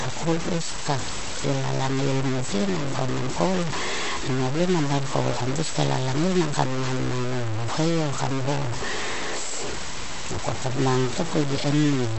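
Throughout the speech, grainy distortion tracks the signal, nearly as loud as it, and quiet stretches drop out or sputter. This is likely low bit depth without dither, consistent with 4-bit truncation. The audio is also cut off at 8.1 kHz and sounds watery and swirly with smeared attacks, which fits MP3 compression at around 46 kbps.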